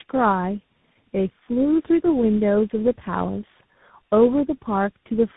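Tandem speech coding runs through the whole clip. The speech passed through about three speech coders in a row, with plain telephone links between them. Each coder worked on the already damaged output of the one before. The damage stacks up. Nothing is heard above 3.8 kHz, so the speech sounds muffled. It is also rough and warbly. The last stage has the slope-tracking hiss that points to a CVSD link.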